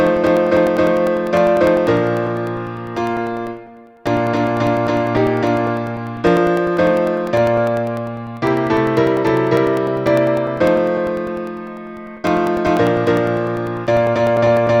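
From 0.07 s right through to 14.67 s there's a steady tick running under the sound, once every 0.1 s, so ten a second. That's periodic USB or driver dropouts. Something keeps stalling the USB bus or the audio driver on a fixed schedule, and each time a couple of milliseconds of audio get dropped and replaced with silence. You only hear the ticks while there's signal, because a tiny gap is invisible in quiet.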